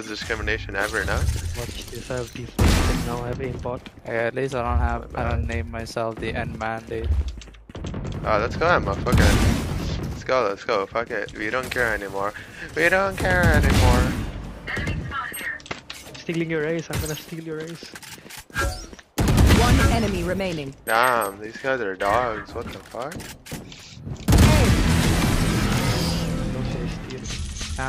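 No technical faults can be heard anywhere in the signal, which stays steady and intact throughout.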